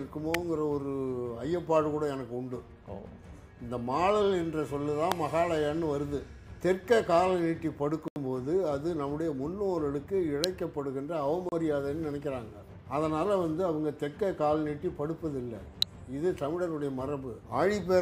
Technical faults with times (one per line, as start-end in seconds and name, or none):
0.34 electrical switching spike
5.12 electrical switching spike
8.08-8.16 block of digital silence
10.44 electrical switching spike
11.49-11.52 block of digital silence
15.82 electrical switching spike